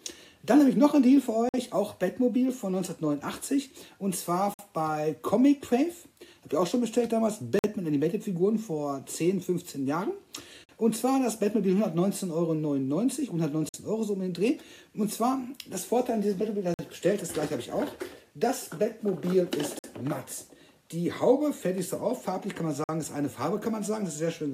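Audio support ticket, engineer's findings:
Short dropouts to silence, 50 ms each, at 1.49, 4.54, 7.59, 10.64, 13.69, 16.74, 19.79 and 22.84 s. Gap between chunks: playback or storage pads each 3-second chunk join with silence, likely from the player starting chunks late.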